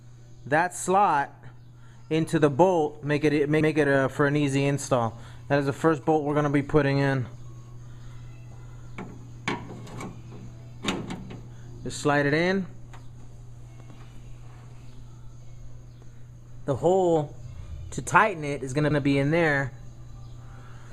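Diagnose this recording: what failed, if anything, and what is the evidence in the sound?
The failure is overlapping chunks, in the buffering or chunked-processing stage. At 3.61 s and again at 18.91 s, a short stretch of about 100 ms plays twice. Each join gives a brief stutter or click. The audio was handled in blocks of about 5 s. Each new block began slightly before the previous one ended, so the overlapped 100 ms was output twice instead of being trimmed.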